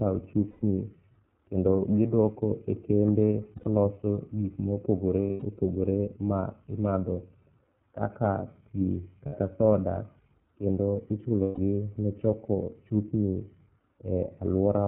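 The whole recording has passed through the iLBC codec, and the band-limiting and rough excitation coding point to its 13.33 kbps mode with 30 ms frames. Nothing above 4 kHz survives, so the speech sounds narrow and telephone-like, and the coding damage is plainly audible throughout as a slightly gritty, synthetic edge to the speech.

Lost iLBC frames then interrupt the stream five times. At each gap the decoder fills in by repeating the last pitch period blended with noise, so the audio holds a buzzy, breathy vowel instead of the true sound. The first gap runs from 0.50 to 0.63 s, about 120 ms, which fits four missing frames. The second, from 3.56 to 3.67 s, follows "kendo gidwoko e kembe" and lasts about 90 ms. The third, from 5.31 to 5.44 s, sits between "gik mopogore" and "opogore ma imadho". The fourth, the shortest, runs from 9.26 to 9.36 s. The longest, from 11.42 to 11.58 s, about 150 ms, comes just before "ne choko chupni". 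Because each iLBC frame is decoded independently, the speech snaps back cleanly right after every gap.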